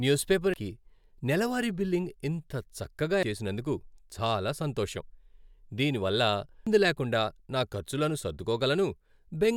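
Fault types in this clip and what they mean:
Damaged data in a compressed stream: three brief glitches break into the speech, at 0.54 s just after "న్యూస్ పేపర్", at 3.23 s just before "చేసినందుకు చాలా సంతోషం", and at 6.67 s, each heard as a short blip or squawk. At those points the encoded bytes are corrupted, so the decoder misreads the affected frames, loses its place in the stream and resynchronises at the next intact frame header.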